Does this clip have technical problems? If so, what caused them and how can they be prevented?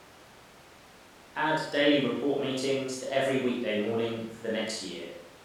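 No, this clip has no technical problems, so there is nothing to prevent.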